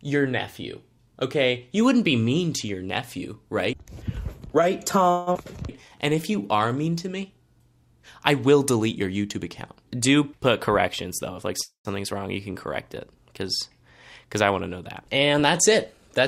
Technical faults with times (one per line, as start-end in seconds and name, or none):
5.11-5.38 long network dropout
5.81-6.73 jitter buffer slow-down
10.68-11.54 jitter buffer speed-up
11.61-11.88 call audio freeze
15.08-16.11 jitter buffer speed-up